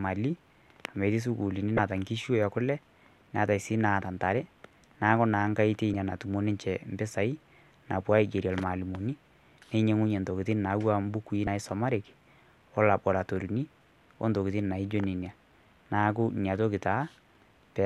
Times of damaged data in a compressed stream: 1.75-1.79, 5.93, 11.44-11.48

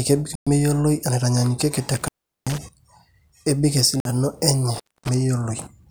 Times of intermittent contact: 1.97-2.58, 4.74-5.09

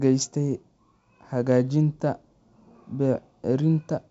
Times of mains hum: none

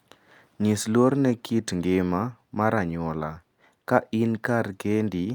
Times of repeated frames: none

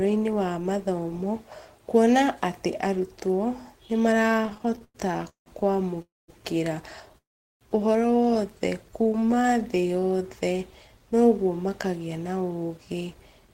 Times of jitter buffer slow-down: 8.91-11.26

